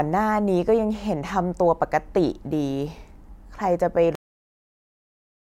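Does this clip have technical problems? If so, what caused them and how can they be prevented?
Yes. Cut-off end at 4.15 s: the final buffers were never written, so the speech stops mid-sound and drops straight to digital silence without decay. Prevent it by flushing and closing the recording or export stream fully before stopping capture or ending the file.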